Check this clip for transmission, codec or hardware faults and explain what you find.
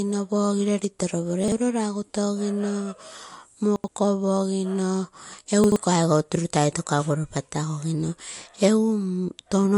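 Two faults are audible in this speech: codec damage throughout and three brief scrambled moments.

Throughout, MP3 compression is the likely cause of the watery, swirly texture and treble ending sharply at 11.3 kHz, which fits a low bitrate near 50 kbps. Unlike plain low-pass filtering, weak components flicker frame to frame.

At 1.44 to 1.52 s, 3.76 to 3.88 s and 5.64 to 5.76 s, chunks out of order: a 40 ms chunk plays one or two chunks late, giving a jumbled moment. Unlike dropouts, nothing goes missing.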